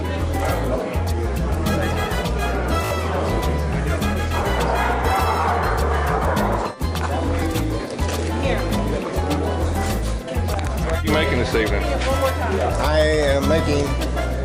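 A Bluetooth stutter hits at 2.85–2.91 s: lost packets, about three judging by the 56 ms gap, made the receiver loop its last buffer, showing as identical repeating waveform slices and vertical spectrogram striping.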